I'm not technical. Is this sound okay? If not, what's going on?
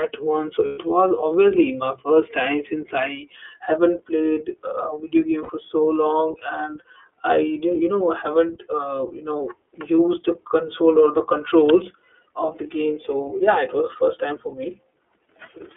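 No. The whole recording sounds like a phone call: thin, muffled at the top, and a bit rough and synthetic. That's the iLBC codec, a phone-line voice compressor that keeps only the middle range of sound and rebuilds each short slice of the voice separately.

There are also two lost iLBC frames events. At 0.66 s, just before "was obviously my first", a brief buzzy, held sound lasts about 120 ms. At 5.43 s, between "played a video game" and "so long and", a shorter one lasts about 60 ms. Bits of the transmission went missing, and the decoder filled the gaps by repeating the last bit of voice with some noise. The voice recovers almost immediately afterward.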